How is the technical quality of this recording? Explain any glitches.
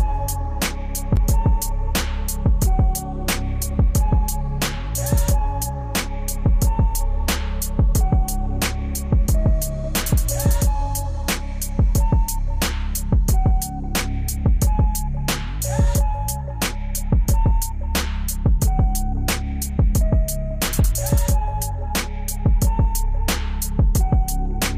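There is one glitch: at 1.16 s the sound drops out for about 12 ms and comes straight back, heard as a brief tick rather than a noticeable hole. This is a block of digital silence. A run of samples was replaced with zeros, so the waveform jumps to nothing and back without any fade. The length fits a 512-sample buffer that the program did not fill in time.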